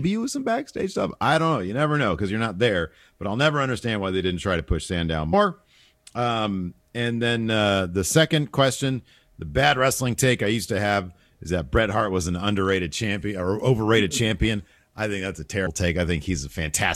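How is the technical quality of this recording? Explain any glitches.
The recording has two short dropouts where compressed frames are skipped, one at 5.32 s and one from 15.65 to 15.67 s. In each, a few encoded frames were missing or rejected by the decoder as corrupt, so playback jumps ahead, dropping about a tenth of a second of speech. At each join the speech briefly lurches forward.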